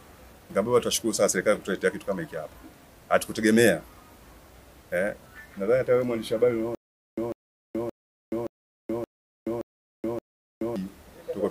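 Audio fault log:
6.75–10.76 s, stutter with silent gaps: A 147 ms fragment plays, then about 426 ms of dead digital silence. The cycle repeats seven times, every 573 ms. The likely cause is a stalled stream replaying its last chunk at each retry. The audio in between is lost.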